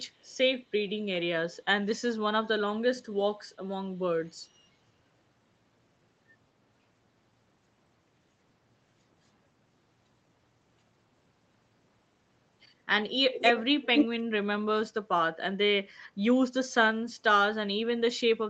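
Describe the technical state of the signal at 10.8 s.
At 10.8 s the speech comes through intact, carried over the call path with no fault at that moment.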